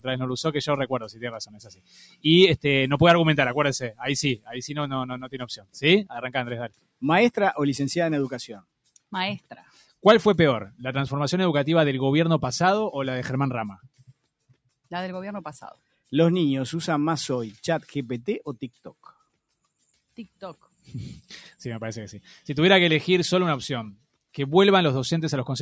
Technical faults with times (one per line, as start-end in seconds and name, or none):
0.00-25.61 noise suppressor applied to music or sounds
0.94-2.25 sound cut by the noise suppressor
4.36-4.52 sound cut by the noise suppressor
5.20-5.78 sound cut by the noise suppressor
6.69-7.03 sound cut by the noise suppressor
9.40-10.04 sound cut by the noise suppressor
13.76-14.25 sound cut by the noise suppressor